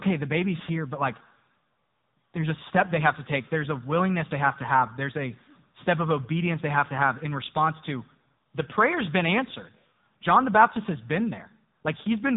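From start to finish the speech carries the marks of the AMR narrowband mobile codec, heavily degraded. Nothing reaches above 3.8 kHz, so sibilants and consonant detail are dull and muffled. The codec rebuilds the voice from a vocal-tract model excited by sparse pulses. At this level of damage that leaves a buzzy, synthetic quality, which fits one of the low AMR-NB modes at around 6.7 kbps.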